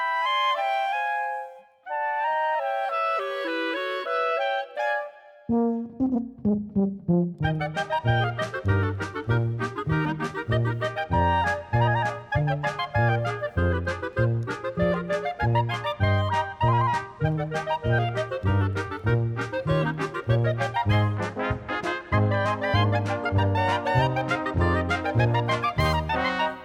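No technical faults can be heard anywhere in this audio.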